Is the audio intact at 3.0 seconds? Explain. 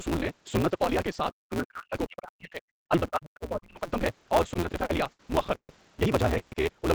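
No, there's quite a bit going on right around 3.0 s.

First, the block size mismatch (truncated) runs through the whole clip, so it's present here too. One stage hands over longer blocks than the next one reads, which fits a 256-sample read, and the tail of each block gets dropped. You hear a steady buzz at about 172 Hz, and the speech runs roughly 1.88 times fast while staying close to its normal pitch.

Second, from 2.90 to 3.02 s the speech dips, falling by around 15 dB at its deepest, with about a tenth of a second affected in total. That's speech suppressed in double talk, likely caused by the echo canceller failing to separate the talker from loudspeaker echo while both sides were talking, so it turned everything down at once.

Third, overlapping that, from 2.99 to 3.10 s there's the other side's voice leaking through, faint at roughly 25 dB below the speech. The likely cause is far-end audio from the loudspeaker that the echo canceller didn't fully scrub from the microphone, so a scrap of a second voice slips in right where the main speech is being pushed down.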